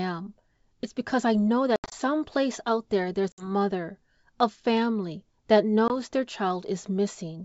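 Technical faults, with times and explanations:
1.76–1.95 s, 3.32–3.49 s and 5.88–5.93 s, packet loss on an ADPCM call: roughly seven, three and one packets were dropped (120, 60 and 20 ms) and replaced by silence. The decoder's adaptive predictor and step size then disagree with the sender's, so each hard-edged hole is followed by speech with brief, slight distortion.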